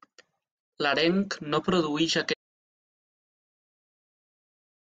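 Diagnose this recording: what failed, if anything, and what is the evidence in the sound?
The speech stops abruptly at 2.34 s and the rest of the clip is pure silence, with no room tone, noise floor or fade. That is an audio dropout to silence, likely a lost input device or link upstream of the recorder, which kept writing silence.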